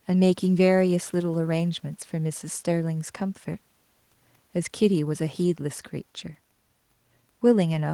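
No technical faults can be heard anywhere in the recording.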